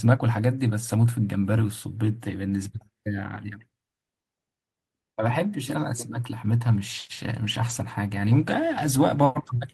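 Call bitrate drop from 6.67 s to the end: starved of bits, the encoder codes speech coarsely and it turns rough, consistent with roughly 32 falling to 16 kbps.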